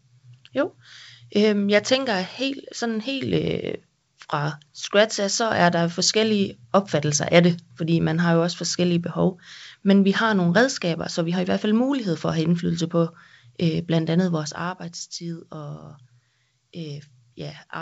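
No faults found in this speech clip; the level moves are smooth, and the band-limited wideband sound shows no coding damage.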